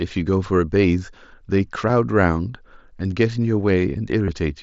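Speech over an mSBC Bluetooth link, bandwidth capped at 8 kHz, with concealed Bluetooth headset packet loss: a nearly hidden blip at 1.89 s, and a buzzy held-tone patch from 4.26 to 4.28 s, whose roughly 22 ms gap fits three lost packets.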